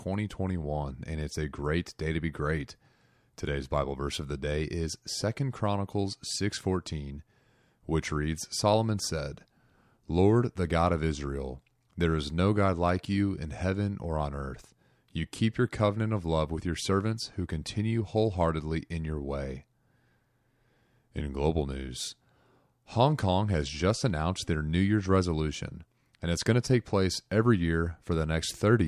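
No faults detected in the speech at any point in the recording.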